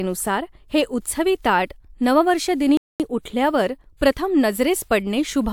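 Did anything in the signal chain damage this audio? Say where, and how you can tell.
Yes: a playback stall at 2.77–3.00 s, after "हे उत्सवी ताट नववर्ष", silences speech for 0.23 s before "उठल्यावर प्रथम", likely a player buffer underrun or blocked thread.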